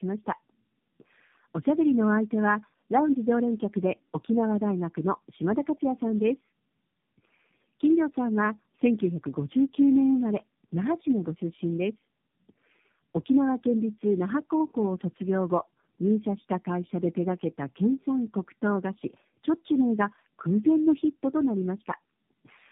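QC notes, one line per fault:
Throughout: tandem speech coding. The speech sounds rough, muffled and warbly, with a dull top end that holds nothing above about 3.7 kHz. The call passed through three low-rate speech codecs in a row, G.729A at 8 kbit/s and then AMR-NB at 7.4 and 10.2 kbit/s, with G.711 links between them. Each codec re-encoded the previous one's already damaged output, so their distortions stacked.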